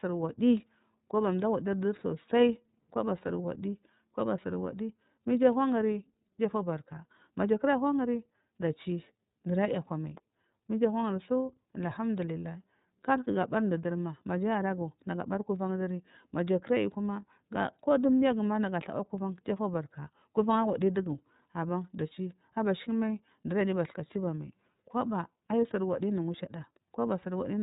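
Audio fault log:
Throughout, iLBC codec: the speech stops sharply at 4 kHz, so a spectrogram shows an empty band above that line. The plainly audible rough, slightly synthetic texture comes from coding each frame's excitation independently, which fits 30 ms frames at 13.33 kbps.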